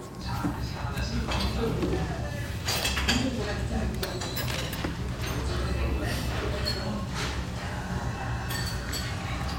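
At 4.48 s a burst of scratching and rustling cuts across the sound. It lasts until 4.64 s. This is cable scratch noise. It is only slightly quieter than the sound itself. A worn cable or connector was likely moved, making its contact resistance jump.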